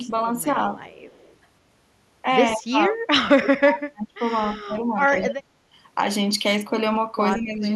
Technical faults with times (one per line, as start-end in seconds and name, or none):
0.88-1.36 echo leak
2.56-4.20 speech suppressed in double talk
4.47-5.52 speech suppressed in double talk
7.36-7.65 speech suppressed in double talk